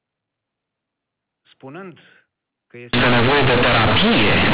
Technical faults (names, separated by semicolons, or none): companded audio read as linear